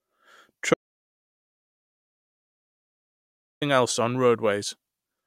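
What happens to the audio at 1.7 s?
At 1.7 s the speech is in the middle of an audio dropout to silence that runs from 0.74 s to 3.62 s. The input was likely lost while recording continued and wrote silence, so about 2.87 s of speech is gone, leaving silence with no room tone.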